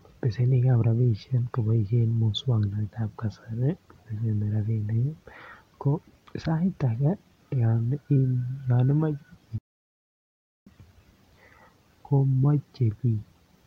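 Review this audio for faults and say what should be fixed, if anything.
A playback stall silences the speech from 9.58 to 10.67 s, a gap of about 1.08 s in mid-flow. The talker then resumes. The likely cause is the player running out of buffered data or its thread being blocked. Larger buffers and a non-blocking audio thread would prevent it.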